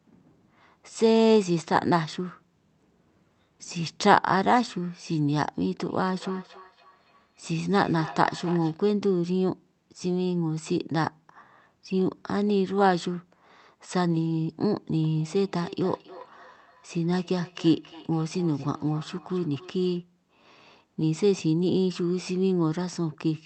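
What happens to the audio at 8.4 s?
Feedback echo between two devices (5.86 to 8.82 s): one device's playback re-enters the other's microphone, so speech returns roughly every 300 ms as ringing repeats about 16 dB down.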